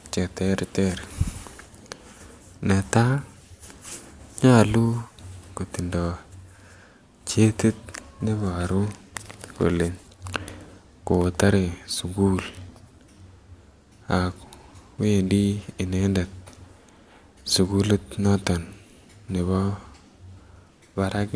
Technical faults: none

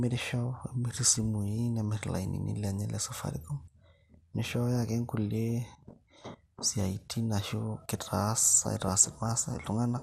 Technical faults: MP2 compression; DAB burbling

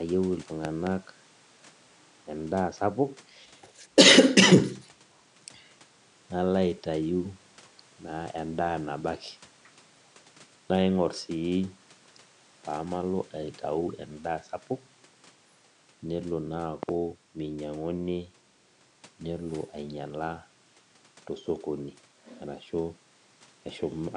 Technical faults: loud pop

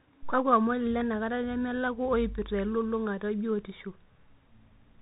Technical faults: Bluetooth CVSD headset codec

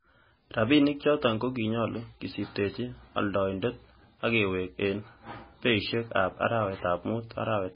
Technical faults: MP3 compression

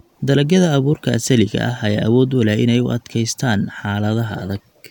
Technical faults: none

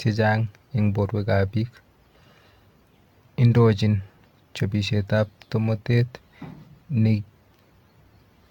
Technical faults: generation loss

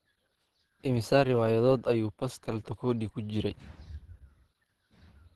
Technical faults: Opus compression

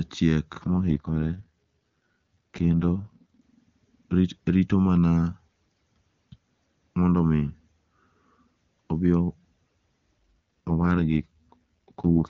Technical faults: AMR rate drop

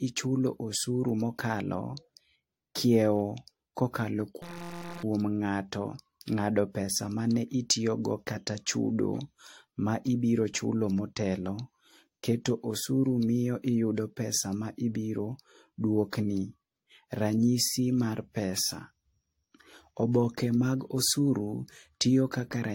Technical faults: generation loss; system hang loop

